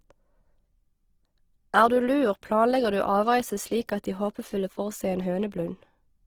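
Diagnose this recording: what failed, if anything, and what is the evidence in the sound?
Codec stage. Throughout, the speech is grainy and rough, noise-filled up to 20.4 kHz. Likely Opus compression in music mode, fitting about 16 kbps.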